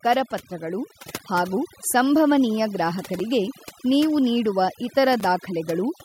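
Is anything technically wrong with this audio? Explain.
Yes, there are three problems.

Overdone noise removal runs through the whole clip. A noise reducer set far too strong shuts off individual frequency bands that sit near its noise estimate, so the background falls to near silence dotted with twinkling specks. Unlike codec smearing, the artefacts cluster where the speech is quiet.

At 1.02 s the microphone volume is stepped up: automatic input control decided the level was too low and raised it by about 4 dB in one move. Speech and background jump together and stay up, which separates it from a compressor pumping back and forth.

A gap between chunks appears at 3.19 s and again at 5.20 s, each a hole of about 7 ms. The audio was handled in 2.0 s chunks, and silence was left at the joins, so the sound stops and restarts with hard edges. Nothing is missing, unlike a dropout, and the exact 2 s spacing gives it away.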